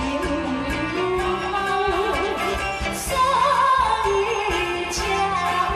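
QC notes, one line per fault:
2.92–5.65 s, train of clicks: a burst of about twenty sharp ticks at roughly 8.1 per second, unevenly spaced, each about as loud as the underlying sound, so they cut through it and sit audibly on top. The likely cause is repeated pulse injection such as nearby equipment interference or a faulty connection. On a waveform they appear as thin, near-identical spikes. A spectrogram shows narrow vertical broadband lines at irregular intervals.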